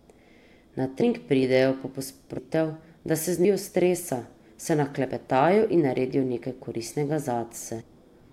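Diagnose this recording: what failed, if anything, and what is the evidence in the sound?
Speech lurches forward through a brief smeared blip at 2.37 s and 7.80 s, losing roughly 300 ms and 150 ms. This is compressed frames skipped, at the codec or storage stage: runs of whole 26.1 ms frames went missing or were rejected, and overlapping neighbours soften each join.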